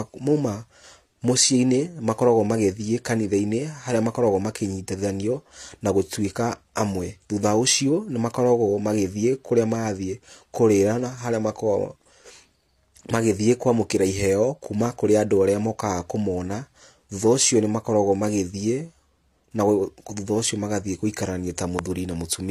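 Speech with transcoding between lossy codecs throughout: nothing above 14.2 kHz, with smeared, synthetic-sounding highs layered over the cleaner quantisation of a second encoder. Unlike a single low-bitrate encode, two distinct artefact types coexist, likely from HE-AAC re-encoded to AAC-LC.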